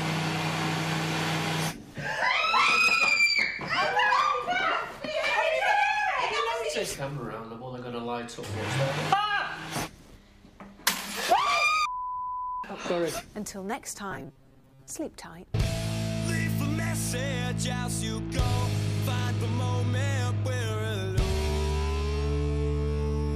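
From about 14.11 to 14.91 s the sound goes robotic, with a rigid metallic buzz pitched at 134 Hz. That's likely repeated short buffers: roughly half the audio gets replaced by loops of the last 7.5 ms or so while the real material is skipped.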